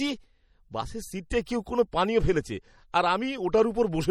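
An encoder starved of bits has, most likely, pushed the whole speech recording through MP3 compression, and the damage is plainly audible from start to finish. The codec has dropped weak frequency lines that flicker in and out between frames, giving the speech a watery, swirling texture and metallic chirps on sibilants, which fits a low bitrate around 48 kbps. Nothing survives above 19.3 kHz, where the treble is cut off flat.

The same transform coding produces pre-echo at 1.30 s and again at 1.45 s. Each time, quantisation noise meant for a sharp attack late in a block spreads across the whole block, filling the quiet just before it. The result is a brief hiss running ahead of the onset, about 14 ms the first time and 19 ms the second, leaving each attack soft and smeared.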